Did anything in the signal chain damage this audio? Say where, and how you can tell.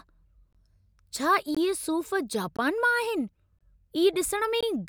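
Yes, there is a gap between chunks at the playback or streaming stage. The speech is handled in 1.0 s chunks, and 20 ms of silence is inserted at each join. That puts regular hard-edged holes at 0.53–0.55, 1.55–1.57, 2.57–2.59, 3.59–3.61 and 4.61–4.63 s, interrupting the sound without removing any.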